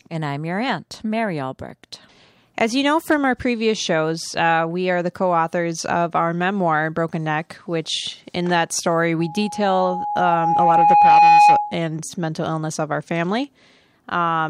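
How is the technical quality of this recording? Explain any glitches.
The recording has one clear problem. After "which in that story", at 9.19 s, a loudspeaker feedback squeal sets in and runs to 11.81 s, clearing just before "mental illness of our". A microphone was picking up the speaker it was feeding, and around 831 Hz the loop gain went past one, so that tone fed on itself. You hear a pure whistle swell over about two seconds until it's roughly 10 dB louder than the speech.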